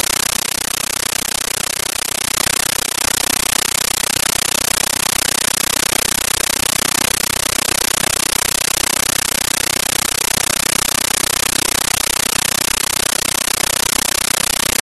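A speech clip where, for the whole run, the sound is replaced by very loud, harsh, chattering static. That's a compressed stream played as audio: an AC-3 (Dolby Digital) bitstream went out over the digital link as if it were ordinary samples, with no decoder in the path. Each frame comes through as a 13.3 ms noise burst followed by zero padding, repeating 31.25 times a second, which fits a 640 kbps AC-3 stream.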